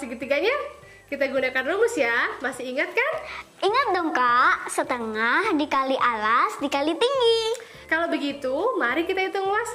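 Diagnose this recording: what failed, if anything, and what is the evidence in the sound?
A USB whine sits under the audio for the whole clip: a steady, fixed-pitch tone at 8 kHz, roughly 45 dB below the signal. The failure is in the analogue wiring, through power or ground. The bus draws current in 125 microsecond microframes, and that 8 kHz pulse leaks into the analogue path. Mains hum would sit at 50 or 60 Hz and its harmonics. This tone lands exactly on the microframe rate, which points to the bus.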